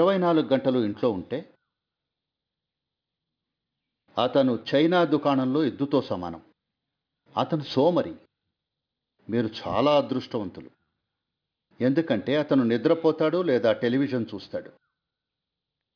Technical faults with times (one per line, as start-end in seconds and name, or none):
0.00-15.96 aliasing